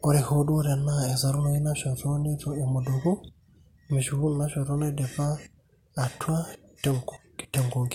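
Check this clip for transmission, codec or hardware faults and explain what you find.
Nothing in the speech recording points to a problem in how the signal was carried, encoded or captured, and it arrives intact.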